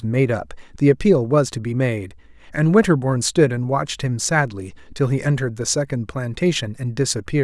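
No technical faults are audible.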